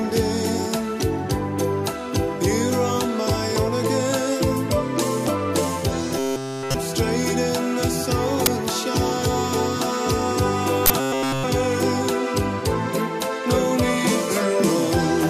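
From 6.19 to 6.74 s, and again from 11.00 to 11.44 s, the sound goes robotic: a rigid, metallic buzz pinned at 133 Hz. That's likely repeated short buffers, with a chunk of roughly 7.5 ms looped over and over while nearly all the real audio gets skipped. In between, at 8.46 s and again from 10.86 to 10.90 s, there are uninitialised buffer bursts, blocks of about 10 ms and 40 ms played before any audio was written, so leftover memory comes out as sharp, loud digital noise.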